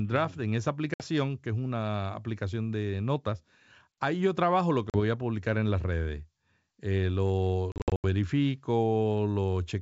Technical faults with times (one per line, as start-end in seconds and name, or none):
0.94-1.03 packet loss on an ADPCM call
4.90-5.00 packet loss on an ADPCM call
7.72-8.07 packet loss on an ADPCM call